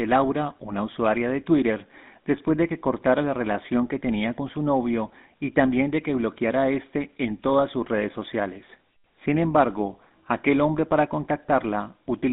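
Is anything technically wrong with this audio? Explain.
Yes. The speech has passed through a GSM full-rate codec, and the damage is plainly audible from start to finish. The codec models the vocal tract as a filter and excites it with a regular pulse train, keeping only a third of the excitation samples. That coarse excitation gives a buzzy, gravelly roughness. The band is held to roughly 200 Hz to 3.7 kHz, so the sound is thin and muffled. This fits a rate near 13 kbps.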